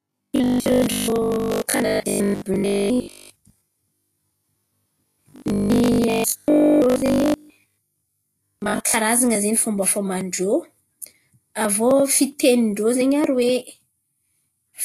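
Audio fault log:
throughout: Vorbis compression, likely. The speech sounds hissy and grainy, and the damage is plainly audible. Nothing is left above 14.2 kHz, so the top of the treble is simply gone. Below that, the high detail has been coarsely quantised and turned into noise of similar energy. Attacks lose their edge. The amount of damage fits a low bitrate of about 39 kbps.
0.02 to 8.94 s: Robotic sound from repeated short buffers, likely. For most of the first nine seconds, the speech becomes a rigid, metallic buzz at 50 Hz. New audio arrives too seldom, so a short stretch keeps being replayed while the real audio is skipped. A 50 Hz buzz means each repeated piece lasts 20 ms. Most of the sound in this span is repeated. The speech still follows its rough shape.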